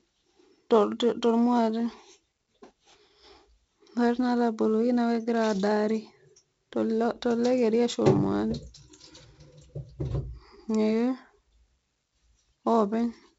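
A gritty hiss rides on every loud syllable from start to finish, swelling and fading with the speech level, and sharp consonant onsets come out roughened and distorted. Nothing sounds above about 7.7 kHz, so the top end is dull throughout. This is heavy 4-bit ADPCM compression. Each sample is coded as a small 4-bit step from a prediction, so quantisation noise tracks the signal, and the step size cannot adapt quickly enough for attacks. The bandwidth fits a 16 kHz sample rate and about 64 kbps.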